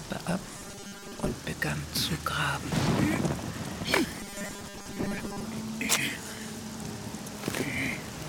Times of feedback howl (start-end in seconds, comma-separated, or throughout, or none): none